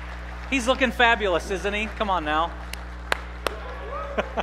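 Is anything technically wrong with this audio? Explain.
Yes. Mains hum runs through the whole clip, a steady low tone at 60 Hz sitting roughly 10 dB below the wanted sound. Power-line current is leaking into the signal path, most plausibly through a ground loop or a nearby transformer. On a spectrogram it shows as a bright, unbroken horizontal line at 60 Hz spanning the full duration, and in the waveform as a regular low-frequency ripple beneath everything else.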